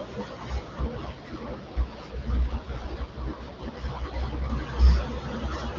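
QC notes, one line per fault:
0.79 to 4.50 s, AMR rate drop: the speech turns rough and synthetic while the band stays as wide and nothing drops out. This fits the HD Voice AMR-WB link stepping down from 23.85 to 8.85 kbit/s, trading speech detail for error protection, then recovering.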